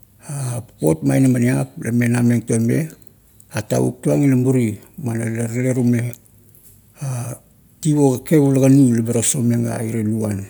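No technical faults are audible.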